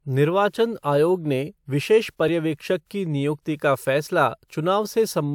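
At 2.28 s and 3.85 s, just after "की निुयक्ति का", brief skips in the speech, a few milliseconds lost each, likely a dropped buffer (overrun).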